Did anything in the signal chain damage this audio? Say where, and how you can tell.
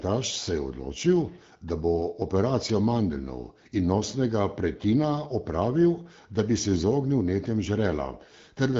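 No, nothing in the signal chain damaged this audio.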